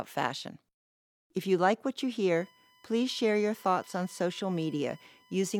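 From 2.36 s to the end at 5.60 s, a steady whine at a fixed 1 kHz sits under the speech, roughly 30 dB below it. This is USB whine: the bus draws current in 1 ms frames, and that 1 kHz ripple leaks into the audio through power or ground.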